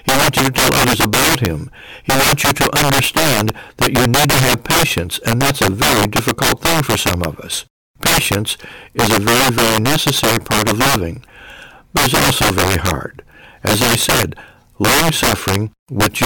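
Integer overflow runs throughout this speech clip. The signal is driven about 13 dB past full scale, and instead of being limited, every peak over the ceiling wraps to the opposite sign. Roughly 7 percent of samples flip this way, producing harsh cracks on louder syllables.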